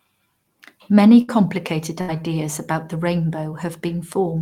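At 1.21 to 1.31 s, and again at 2.01 to 2.17 s just before "about the", the sound smears into a brief held, fading sound and then jumps ahead. Both are a burst of packet loss: about 60 ms of audio never arrived, and the receiver stretched the last sound to cover the gap.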